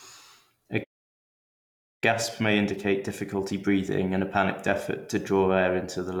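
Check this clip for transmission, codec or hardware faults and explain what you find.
Two playback faults affect the speech, both from the player rather than the codec or the recording.

Playback stall, 0.83 to 2.04 s: the player likely ran short of buffered data, so output went silent for about 1.2 s mid-flow before resuming.

Time-compressed catch-up, 2.04 to 5.04 s: the player trimmed its backlog by cutting and cross-fading small segments, so speech runs about 1.15 times fast at normal pitch.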